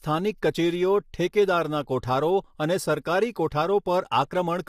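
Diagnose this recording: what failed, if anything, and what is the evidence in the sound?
Across the whole recording the speech sounds rough and grainy, with a hiss filling the gaps between harmonics and a dulled, synthetic top band. The codec stage is the likely culprit: low-delay AAC compression, whose short frames resolve pitch poorly, and the damage fits AAC-ELD at around 32 kbps.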